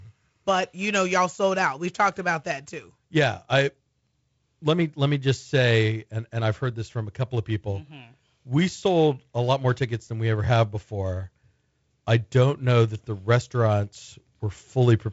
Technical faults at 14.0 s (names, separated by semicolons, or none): none